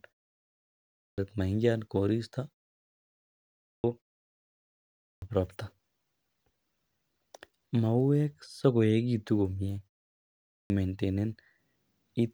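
Clipped start after a pause at 0.6, 3.25, 4.6 and 10.14 s: the output wakes late from silence, eating about 0.6 s, so "maingian koristo" bursts in abruptly.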